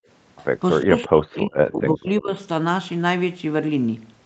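A speech recording, band-limited to nothing above 8 kHz, consistent with an Opus call path at around 32 kbps. In the first 0.07 s the room background is pulled down by about 35 dB and then released. This is background gated by the echo canceller: while far-end audio played from the loudspeaker, the canceller clamped the microphone hard for those 70 ms before letting the ambient sound back in. Between 0.82 and 2.31 s the talker's own speech dips, losing around 35 dB at its deepest and roughly a second of level in total. This is likely speech suppressed in double talk: with both ends active, the canceller could not separate the near talker from the loudspeaker echo and attenuated both. At 1.35 to 1.39 s a brief echo leak appears, a faint delayed copy of earlier speech arriving about 350 ms late and some 25 dB below the main voice. It is likely loudspeaker pickup that the far end's echo canceller failed to fully remove and sent back down the call.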